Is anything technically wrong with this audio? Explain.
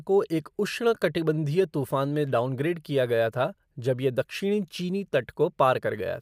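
No, there's nothing technically wrong to point to here; it's just a short speech recording with no faults to flag.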